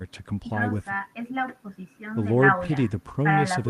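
Nothing in this recording stands out as a technical fault; the speech comes through without any glitch or disturbance worth pointing to.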